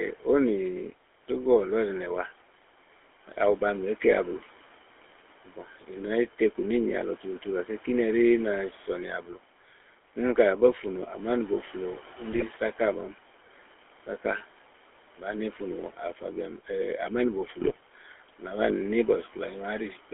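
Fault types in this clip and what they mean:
GSM full-rate codec: The original GSM coder rebuilds the speech from a vocal-tract model driven by sparse, regularly spaced pulses, which fits a 13 kbps full-rate stream. The sound is confined to about 300 Hz to 3.4 kHz and carries a plainly audible buzzy, gravelly roughness throughout.
GSM bit errors: Flipped bits reached the speech decoder and corrupted its filter, pitch and gain values for a few frames. The speech briefly breaks into squawks, pops and gargling from 12.32 to 12.43 s, and again from 17.60 to 17.79 s.
Speech cut by the noise suppressor: The suppressor mistook part of the speech for background and turned it down along with the noise. Between 15.93 and 16.22 s the level dips by up to about 10 dB for roughly a tenth of a second, so that stretch sounds swallowed and faint.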